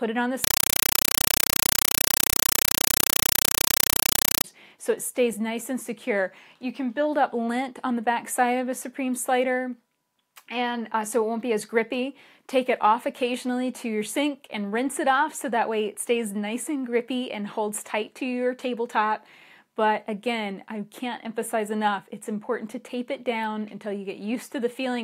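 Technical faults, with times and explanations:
0.44–4.44 s: compressed stream played as audio. Undecoded Dolby Digital data was taken as ordinary samples, giving very loud chattering static. Each 5.33 ms noise burst is followed by zero padding, repeating 31.25 times a second, which fits an AC-3 stream.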